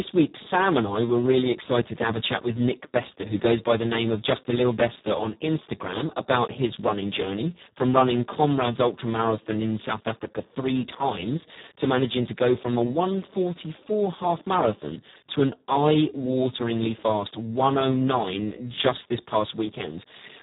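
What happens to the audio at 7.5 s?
At 7.5 s the speech carries Speex codec damage, which runs through the whole clip rather than starting there. The CELP coder has very few bits for the excitation, consistent with a bitrate around 4 kbps, so voiced sounds come out hoarse, buzzy and somewhat robotic. On a spectrogram, harmonics look smeared and grainy, and the energy stops at about 3.8 kHz, leaving a flat empty band above it.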